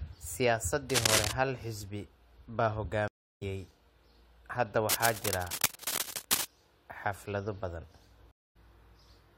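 From 0.90 to 1.32 s, just before "hal xisbi baa", a scratchy, rustling burst sits a few decibels above the speech. This is cable scratch noise, likely from a worn cable or connector whose contact resistance jumped as it moved. After "hal xisbi baa", the audio drops out from 3.08 to 3.43 s for about 0.34 s, then resumes roughly 0.15 s further on. This is a stream reconnect, where the connection broke and a fresh decoder picked up mid-stream. A longer scratchy rustle from 4.89 to 6.45 s, about as loud as the speech, is cable scratch noise again, likely from an intermittent contact. After "xaflado badan", a second stream reconnect leaves about 0.24 s of silence from 8.31 to 8.56 s, and the speech rejoins roughly 0.15 s ahead.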